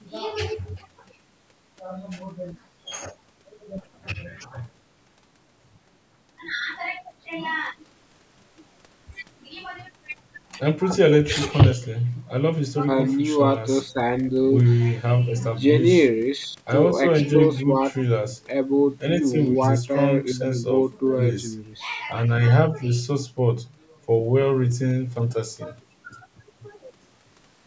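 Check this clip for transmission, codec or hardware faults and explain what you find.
Nothing here sounds amiss at all: the speech has simply been through a call's microphone processing, which trims away the deepest bass and leaves nothing above 8 kHz, and that's just how that path is meant to sound.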